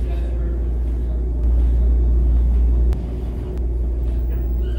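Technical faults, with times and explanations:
1.44 to 3.58 s, doubled audio track: a second, full-band copy of the sound runs roughly 0.7 s behind the first at about the same level, so every event is heard twice. The echo has no decay or room colour, unlike a natural reflection, and it switches on and off abruptly at the range edges. The likely cause is the same signal being captured again through a slower path, or an edit leaving two out-of-step copies in the mix.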